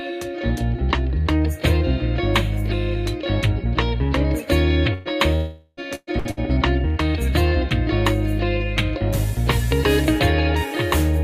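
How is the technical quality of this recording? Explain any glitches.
The recording is disrupted by a cluster of network-related gaps between about 4.9 and 6.4 s, where parts of the audio are lost and covered over.

Burst of packet loss occurs at 4.93–5.08 s, 5.95–6.10 s, 6.19–6.28 s and 6.31–6.40 s. A short run of packets failed to arrive in time, so the receiver stretched the last received sound across the hole, about 120 ms in the first two cases and 60 ms in the last two, then picked up again later with that stretch missing. Each is heard as a brief smeared buzz or hiss. The 5.95 s event ends in roughly 30 ms of silence. Their shortness and the quick recovery set them apart from the longer gap below.

Between 5.35 and 5.80 s, a stretch of roughly 420 ms of audio goes missing. The last sound is held and fades for nearly the whole span, leaving about 20 ms of silence before the audio returns further on. 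The cause is likely a long network dropout. Unlike the bursts, the concealment runs several tenths of a second, long enough for the filled sound to decay into near silence.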